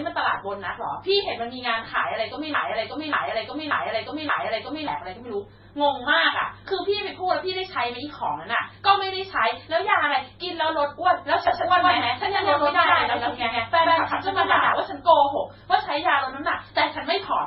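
Throughout, the speech sounds like transcoding between lossy codecs, likely a low-rate MP3 re-encoded to HE-AAC. Swirly and smeared artefacts overlap, and the spectrogram shows nothing above 5.6 kHz.

From 2.54 to 4.88 s, a broken-record loop plays a 0.58 s fragment four times back to back, likely from a stalled stream. The waveform shows identical repeating blocks.

From 11.47 to 14.73 s, a doubled audio track adds a dry copy at roughly equal level about 150 ms late, likely from a second capture path. The spectrogram shows shifted duplicate patterns that start and stop abruptly.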